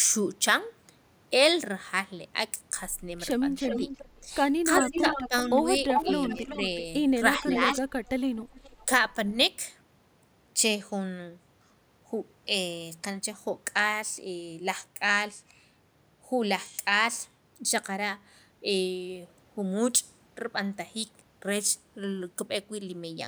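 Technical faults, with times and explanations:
3.56–4.20 s, 4.78–6.81 s and 7.38–8.86 s: echo leak. A delayed copy of the speech trails the original by 379 ms, and by 406 ms in the last stretch. It sits about 5 dB below the speech, and about 10 dB below in the last stretch. This is likely a loudspeaker echo that the far end's canceller failed to remove. On a spectrogram, the harmonic patterns repeat, fainter, about 0.4 s later.
3.79–4.27 s, 4.80–5.49 s, 6.05–6.61 s, 7.38–7.85 s and 8.53–8.69 s: speech suppressed in double talk. The speech dips in pieces, roughly 100–300 ms in all per span. The drops reach about 15 dB, or about 10 dB and 5 dB in two spans. This is likely an echo canceller ducking the talker while the echo overlapped. The waveform envelope shows notches there.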